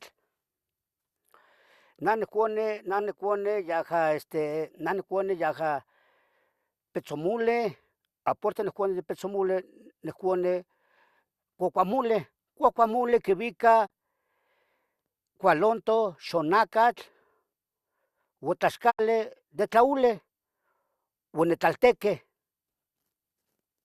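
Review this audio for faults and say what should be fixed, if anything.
The speech has two digital broadcast dropouts, at 13.85–13.92 s and 18.89–19.01 s. Each time, the receiver lost frames or they failed their checksum, so it muted until good frames returned. The lost sound, 24 ms and 72 ms, fits one and then three lost frames. On a waveform each shows as a 20 ms fade into flat silence; on a spectrogram, a blank vertical band across all frequencies. Stronger reception or more error protection on the link would prevent these.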